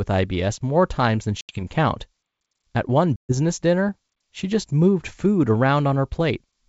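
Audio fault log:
1.41 to 1.63 s and 3.16 to 3.33 s, packet loss on an ADPCM call: the speech drops into hard-edged silent holes, about 80 ms of audio missing in the first and about 130 ms in the second. That fits a handful of packets lost, then roughly a dozen or more. When the wideband sound comes back, the decoder's predictor and step size no longer match the sender's. So it returns with some roughness that settles within tens of milliseconds.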